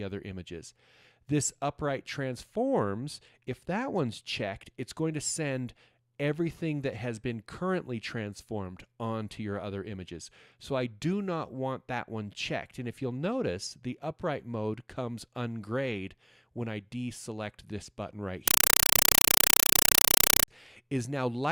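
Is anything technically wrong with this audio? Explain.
Yes. From 18.48 to 20.48 s the sound turns into very loud, chattering static: bursts of noise about 5.3 ms long, repeating 31.25 times a second. This is a compressed stream played as audio. The pattern fits an undecoded AC-3 bitstream, each data frame read as ordinary samples and followed by zero padding.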